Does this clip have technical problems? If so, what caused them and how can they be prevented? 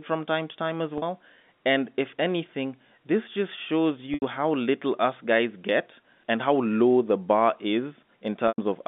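Yes. Three dropouts are covered by packet loss with pitch repetition. At 0.98 to 1.02 s, after "time to time as", a 40 ms gap becomes a slightly held, buzzy tone, which fits two lost 20 ms packets. At 4.14 to 4.22 s, between "anything this just shows" and "how little us guys", 80 ms is lost, and at 8.48 to 8.58 s, 100 ms. The receiver looped the last pitch period and faded it over about 50 ms, so the longer two sink into silence before a short cross-fade brings the sound back. This happens inside the narrow G.711 telephone band. Forward error correction or redundant packets, plus an adequately sized jitter buffer on a less lossy link, would prevent these gaps.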